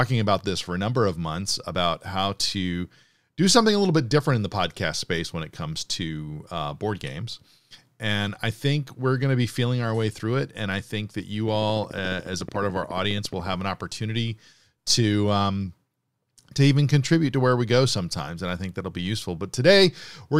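From 11.48 to 13.54 s, just after "I think that you" and ending before "an opportunity to um", a steady ticking runs over the speech: around 30 near-identical clicks at 14.1 per second, evenly spaced and peaking a few decibels above the voice. This train of clicks likely comes from electrical interference or a faulty connection or power supply.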